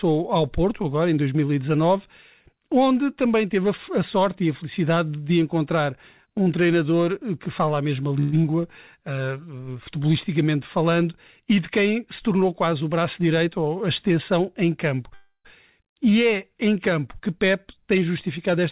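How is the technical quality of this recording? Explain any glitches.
The recording carries several network-related glitches in a call-quality speech signal. The whole clip is band-limited with nothing above 4 kHz, which fits a narrowband codec such as G.711 mu-law at 64 kbps.

Call audio freeze, 8.2 to 8.35 s and 15.14 to 15.47 s: packets were likely held up in transit, so the jitter buffer ran dry. The receiver stretched the last sound into a fading buzz. The first freeze, right after "que fala a mesma", fills 125 ms. The second fills 304 ms and ends in about 60 ms of silence. Nothing is lost, but each inserts a pause.

Skip ahead, 8.43 to 8.46 s: with later audio already waiting, a stretch of around 70 ms was dropped. Playback jumps forward with only a brief 12 ms join. The sound on either side is spliced almost directly, clipping a fragment.

Jitter buffer slow-down, 8.50 to 9.00 s: the buffer was rebuilding its reserve, so the receiver repeated single pitch periods. 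This added 39 ms and ran the audio at 94% speed at unchanged pitch. The sounds leading into "uh futebolisticamente falando e" are drawn out.

Jitter buffer speed-up, 12.22 to 13.65 s and 17.34 to 18.58 s: with too much audio queued, the receiver trimmed short pitch-period pieces repeatedly at the same pitch. The first stretch runs at 108% speed with about 100 ms removed and sounds noticeably hurried. The second, after "é em campo que", runs at 104% with about 70 ms removed.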